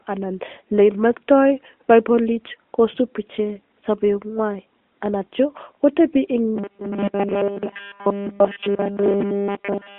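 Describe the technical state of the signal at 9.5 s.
At 9.5 s you're in the robotic sound from repeated short buffers, running from 6.56 s to the end. The speech becomes a rigid 200 Hz metallic buzz, likely from a 5 ms chunk being looped nearly nonstop, all inside the narrow AMR phone band.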